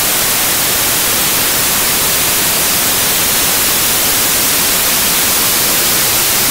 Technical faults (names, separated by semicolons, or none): samples built from the wrong bytes